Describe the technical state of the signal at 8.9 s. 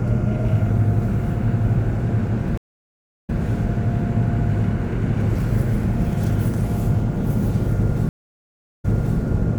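A stream reconnect spans 8.09 to 9.18 s, and 8.9 s falls just after its gap. The connection dropped, the player fell silent for about 0.69 s from 8.09 s, then reopened the stream and started a fresh decoder mid-flow. Because the server resent a burst of buffered data, playback resumes 392 ms earlier than where it broke off. At 8.9 s you hear sound already heard once, just after the silence.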